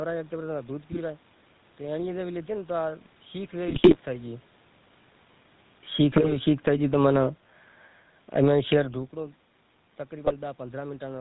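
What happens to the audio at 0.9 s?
From 0.92 to 0.99 s the sound breaks into a short squawking, gargling burst caused by GSM bit errors. Corrupted bits from a weak radio link reach the decoder, so the filter, pitch and gain values for those frames are wrong, which bends the spectrum and throws the level out of line. The span fits about three codec frames. Unlike a dropout, which leaves a silence, this produces harsh, distorted noise.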